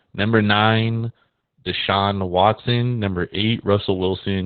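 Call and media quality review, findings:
Opus voice compression, throughout: low-rate SILK coding, narrowband, nothing above 4.4 kHz. Speech muffled, hoarse, slightly robotic; coarse excitation at roughly 8 kbps bitrate, heavy codec damage.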